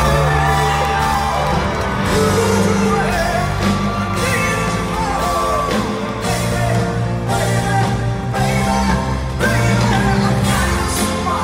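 No technical fault is audible anywhere in this recording.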